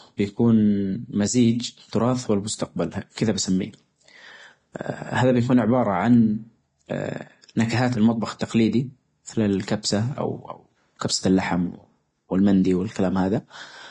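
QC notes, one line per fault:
throughout: Vorbis compression. Heavy hiss and grain with nothing above 10.6 kHz, likely from Vorbis at a low rate, around 30 kbps, coarsely quantising the treble into noise.
8.39–8.41 s and 10.99–11.02 s: pre-echo. Short hiss of about 20 ms and 27 ms smears in before sharp attacks, the second just before "كبسة اللحم", as block-spread quantisation noise leaks ahead.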